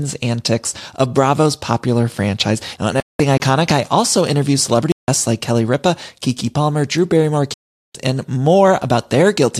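A speech recording with three kinds of fault. In two digital broadcast dropouts, the receiver lost valid frames and muted. The speech cuts out from 3.00 to 3.20 s (192 ms) and from 7.54 to 7.95 s (408 ms), which fits whole frames of about 24 ms going missing. Two blocks of digital silence, from 3.37 to 3.40 s (27 ms) and from 4.92 to 5.08 s (160 ms), point to an output buffer that wasn't filled in time. Zeros replace the sound abruptly. At 6.98 s a bit error spike, a single flipped bit in one sample, produces one sharp broadband tick unrelated to the speech.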